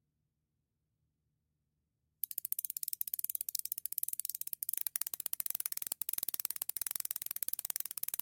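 From 4.77 s to the end at 8.22 s, crude rate conversion takes over. Samples are simply repeated to stretch 44.1 kHz to 48 kHz, and the error sits only a few decibels below the sound, giving a gritty inharmonic fizz. A spectrogram shows stray mirrored tones; the waveform shows small stair-steps.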